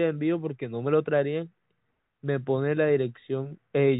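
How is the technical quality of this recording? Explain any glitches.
Nothing stood out on listening to this telephone-band speech recording, and there are no glitches to explain.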